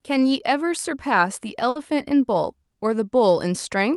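A burst of packet loss runs from 1.69 to 1.78 s in this speech. Packets never arrived in time, so the receiver stretched the last sound it had for about 60 ms, letting it decay into a held, dimming buzz or hiss, then resumed playback further along. About 60 ms of the original speech is skipped outright. The audio reaches the listener through a call codec whose top end stops near 12 kHz, consistent with Opus at a moderate bitrate.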